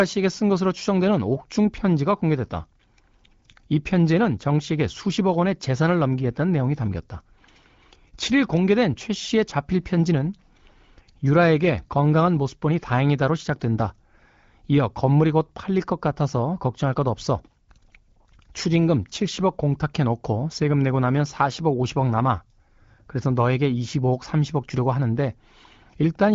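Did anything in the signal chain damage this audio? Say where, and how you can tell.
No, nothing in the chain damaged this speech; it has passed through an AMR wideband (HD Voice) codec, whose clear, lightly coloured sound points to one of the upper rates, around 16 kbit/s, and the audio carries nothing above 7.5 kHz, as that path imposes.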